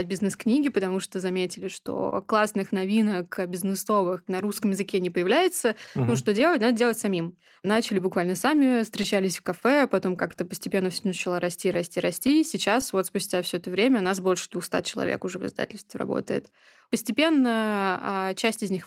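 Clock drift between sender and receiver runs through the whole recording. The sender's clock is slow, by roughly two percent. Its audio arrives a little too slowly, so the receiver's buffer keeps running low and must be topped up to stay in step.

From 0.46 s to 18.06 s, repeated timing corrections compensate for the drift. The receiver stretches the speech, playing it at 99 percent speed. About a fifth of a second is added in total. The edits are small and unevenly spaced, heard as a faintly unsteady tempo.

Scattered short gaps appear from 0.49 s to 3.74 s. A few packets went missing, each patched by extending the last sound. The longest patch is around 30 ms. They come across as brief ticks or smears.

Between 5.86 s and 13.31 s, more scattered short gaps occur, roughly ten of them. Each is short, the longest around 15 ms, filled the same way. The speech stays clear, broken only by tiny hiccups.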